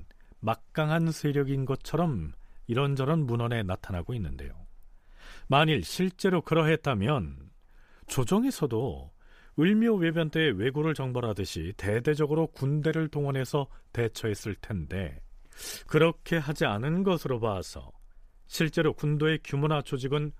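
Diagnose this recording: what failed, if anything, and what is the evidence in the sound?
The failure is in the analogue radio link: a wireless microphone noise hit at 8.08 to 8.16 s, a quick burst of static about 80 ms long over the speech. The FM signal faded as reflections cancelled, so receiver noise surged up through the audio.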